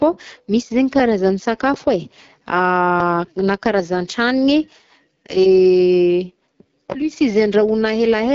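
From start to end, the speech carries AMR wideband (HD Voice) codec damage. Nothing sounds above about 7.2 kHz. The pulse-driven model is working near the bottom of its range, which fits roughly 8.85 kbit/s. Voices turn plainly rough and raspy.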